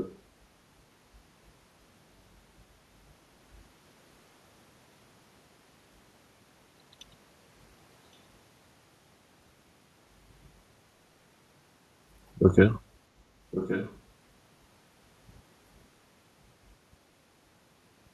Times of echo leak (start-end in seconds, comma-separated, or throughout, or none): 0.00-0.19, 13.51-13.99